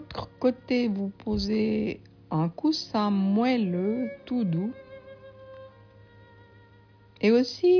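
Nothing in the audio points to a technical fault at any moment, so there's nothing here to describe.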